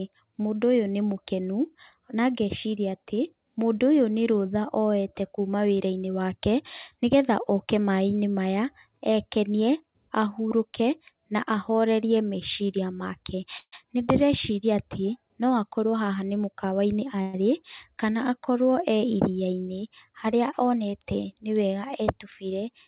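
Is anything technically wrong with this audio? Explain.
Yes. There are two call audio freezes and one jitter buffer speed-up, all in speech that has passed through a narrowband call codec, with nothing above 4 kHz, which fits G.711 mu-law at 64 kbps.

At 13.58 to 13.74 s, just after "na ahorerie meciria make", and again at 17.22 to 17.37 s, there are call audio freezes. The likely cause is packets arriving late, so the receiver's jitter buffer emptied and it had to fill the gap itself. The first freeze fills about 143 ms. The last sound is stretched into a fading buzz that drops to silence for the final 70 ms. The second freeze fills 116 ms with a buzz that never goes fully quiet. In both cases the speech resumes where it stopped, so nothing is lost but the timing is pushed later. On a spectrogram each freeze shows as smeared, repeated harmonic bands that fade out. The first one ends in a blank strip. 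In the waveform each appears as a decaying periodic stretch.

From 15.86 to 17.08 s there is a jitter buffer speed-up. The buffer was holding more audio than its target, so the receiver cut out short pitch-period pieces many times in a row, removing about 150 ms in total. The speech plays at 111% speed at unchanged pitch and sounds hurried. On a spectrogram the syllables look compressed in time while the harmonic spacing stays the same. In the waveform the cycles have tiny splice points but their period is unchanged.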